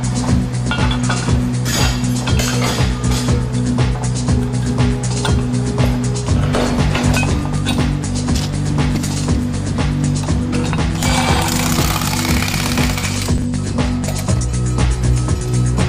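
At 13.38 to 13.44 s the chunks are out of order: one 20 ms chunk arrives two chunks late, so the sound briefly jumbles, with three hard joins. Unlike a dropout or stutter, nothing goes missing and nothing repeats; it is only misplaced.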